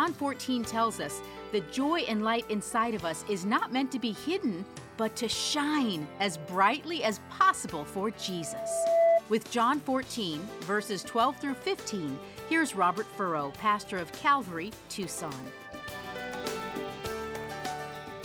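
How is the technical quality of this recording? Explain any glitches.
The recording has two clear technical faults: a burst of feedback around the middle and a steady block-rate buzz running through the final few seconds.

From 8.19 to 9.22 s there is a loudspeaker feedback squeal. A microphone was picking up the speaker it fed, and at 668 Hz the loop gain passed unity, so that tone fed on itself, swelling over roughly 0.7 s to about 10 dB above the surrounding sound. A spectrogram shows a single bright horizontal line at 668 Hz that thickens and intensifies, while the waveform envelope balloons outward.

From 14.6 s to the end, a filter is restarted on every block. It loses its internal state at each block boundary and starts from silence, leaving a small transient each time. This produces a 25 Hz buzz, one tick every 40 ms, that rises and falls with the signal level. A spectrogram shows evenly spaced vertical striations, and a zoomed-in waveform shows periodic spikes at the block edges.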